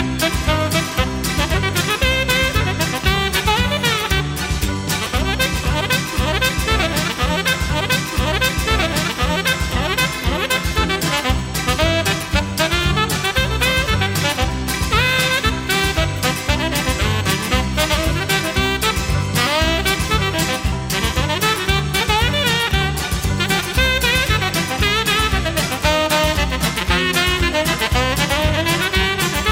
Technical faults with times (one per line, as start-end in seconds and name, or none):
7.69-9.68 stream segment repeated